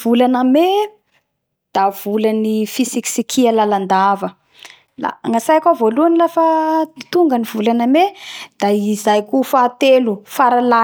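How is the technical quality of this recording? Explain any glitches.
No technical faults are audible.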